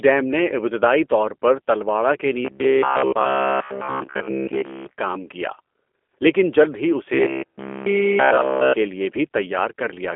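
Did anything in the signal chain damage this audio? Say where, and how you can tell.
Yes. G.729 codec damage runs throughout at the codec stage. Nothing passes above 3.5 kHz, and speech sounds rough and synthetic, consistent with 8 kbit/s pulse-based reconstruction.

Robotic sound from repeated short buffers appears at the buffer stage from 7.14 to 8.73 s. A rigid 66.8 Hz buzz points to a roughly 15 ms chunk, likely replayed almost continuously.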